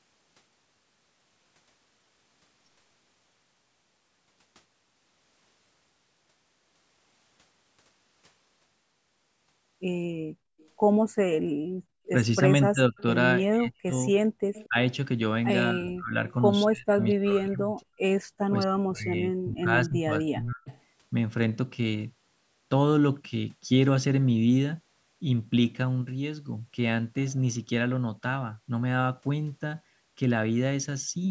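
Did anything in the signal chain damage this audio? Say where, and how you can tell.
Yes. In the call processing stage, the echo canceller's suppressor pulled the microphone down hard. The room background drops by about 35 dB from 10.08 to 12.05 s, about a second in total, and again briefly from 14.26 to 14.4 s. It returns once the suppressor releases.

Echo leak: a faint delayed copy of the far-end speech trails it by 231 ms from 10.59 to 13.02 s, 14.54 to 14.67 s and 17.0 to 17.85 s, and by 241 ms at 20.68 to 20.78 s. Its level is about 20 to 35 dB below the speech. The likely cause is a loudspeaker-side canceller not fully removing its own pickup.

Speech suppressed in double talk: from 12.69 to 20.7 s, while both sides talk, the near talker repeatedly dips or cuts out, by as much as roughly 35 dB, for around four seconds in total. This is likely the canceller mistaking overlapping speech for echo and attenuating everything.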